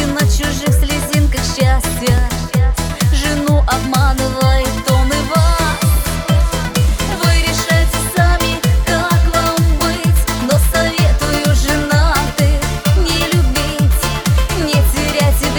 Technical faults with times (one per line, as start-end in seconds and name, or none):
2.10-2.20 loud pop